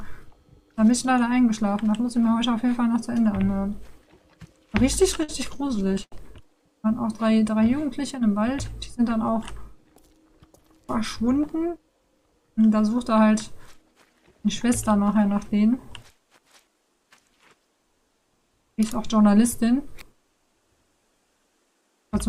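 From 5.23 to 6.14 s the audio stutters with repeated stalls: packets arrived late, the jitter buffer ran dry seven times, and the receiver stretched the last sound to fill about 190 ms. That is 21% of the span, with the longest hold 79 ms. Nothing is lost, but the sound drags and catches.

Jitter buffer speed-up follows at 16.67–17.21 s and again at 21.36–22.29 s. With excess audio queued, the receiver trimmed short pitch-period pieces, around 50 ms and then around 70 ms in total. The sound runs at 109% and 108% speed respectively, pitch unchanged, and feels hurried.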